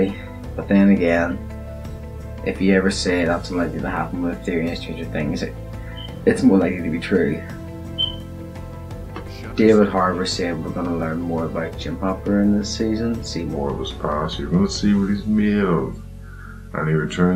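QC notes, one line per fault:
13.56–17.35 s, section at the wrong speed: from 13.56 s to the end, the audio plays at 0.835 times its proper rate, so everything drops about three semitones and drags. The likely cause is this stretch being fitted to the wrong clock. Unlike a pure pitch shift, tempo and pitch fall together. Unlike tape drag or wow, the change is abrupt and then holds steady rather than wavering.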